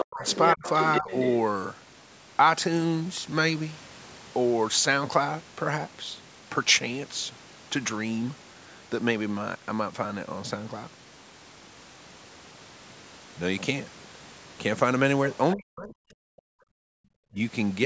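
From 0.0 to 1.37 s the other side's voice leaks through, likely because the echo canceller left part of the loudspeaker signal in the microphone path. A second voice sits only about 5 dB below the main one. Inside that stretch, speech is suppressed in double talk, likely because the canceller could not separate its own talker from the echo while both sides spoke and turned everything down. Between 0.04 and 0.64 s the voice dips for about 0.3 s in total, dropping by about 40 dB at worst. At 1.01 to 1.1 s there is a shallower dip of about 15 dB.

At 15.31 to 15.35 s another brief leak of the other side's voice is heard, likely the same incomplete cancellation, this time faint at about 30 dB below the speech. From 15.54 to 16.18 s speech is again suppressed in double talk, likely from the same confusion between talker and echo. The voice dips for about 0.7 s in all, by up to about 40 dB.

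From 16.46 to 17.03 s the echo canceller gates the background. It clamped the microphone hard while the loudspeaker played, so the room sound falls by about 40 dB for roughly half a second and returns when the canceller releases.

At 17.31 to 17.4 s a last short double-talk suppression pulls the voice down by about 20 dB, likely from the canceller again mistaking the talker for echo. Throughout, the call's microphone processing passes nothing above 8 kHz.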